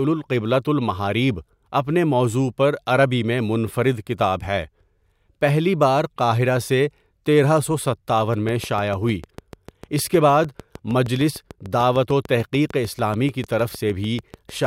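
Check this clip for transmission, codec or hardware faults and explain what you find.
There is one fault: a train of clicks from 8.34 s to 14.65 s, starting just after "قاہرہ سے تیرہ سو". About forty near-identical pulses arrive regularly at 6.66 per second, likely from interference or a faulty connection or power supply, ticking over the speech and its pauses. A waveform shows evenly spaced spikes, and a spectrogram shows thin vertical broadband lines.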